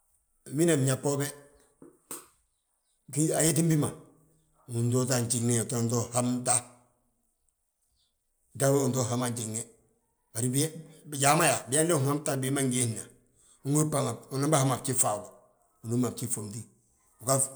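Nothing technically wrong turns up anywhere in this bit of speech, so there's no fault to point to and no time worth flagging.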